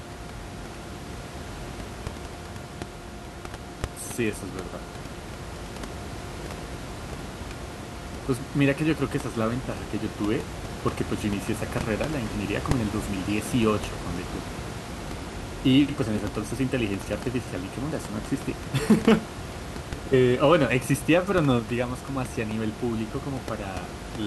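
Speech recording with no technical faults; the room's background noise sits about 10 dB below the speech and belongs to the recording itself.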